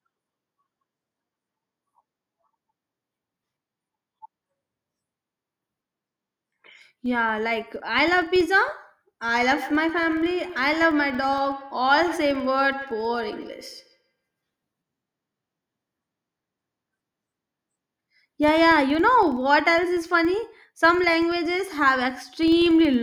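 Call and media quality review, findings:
Filter restarted on every block: steady buzz near 21.5 Hz throughout, tracking speech level. A processing filter is resetting its state each block, so each block starts with a small transient. The rate fits 2048-sample blocks.

Feedback echo between two devices: 9.34–14.15 s, speech returns at around 150 ms spacing, thinner and ringing, peaking at about 15 dB below the speech. The cause is a second device in the room replaying the call into a microphone outside the echo canceller's reach.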